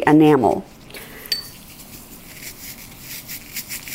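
From 0.94 s to the end, pre-emphasis is left on: the treble lift was never undone, so highs sit about 14 dB above 1 kHz at 10 kHz. This fits a 75 µs FM curve, rising steadily with frequency rather than as a fixed shelf, and sounds thin, bright and sibilant.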